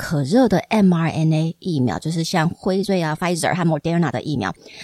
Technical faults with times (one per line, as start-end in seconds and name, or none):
2.76-4.83 time-stretched section